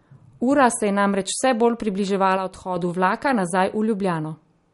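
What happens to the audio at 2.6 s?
A sudden gain jump drops the level by about 6 dB from 2.37 to 2.76 s, just before "vlaka nazaj". Both the speech and the background noise step down at once with no ramp, unlike a fade, which slides gradually. It was likely caused by a gain setting applied in a single sample.

The same moment carries MP3 compression damage. There is nothing above 11.2 kHz, with a watery, swirling texture as weak frequency lines switch on and off. That swirl is what separates it from a plain low-pass filter, and it fits a likely low bitrate near 48 kbps.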